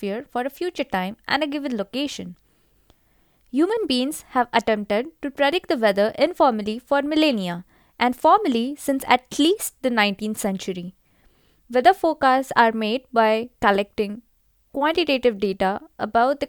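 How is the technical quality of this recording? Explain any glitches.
No glitches or faults heard.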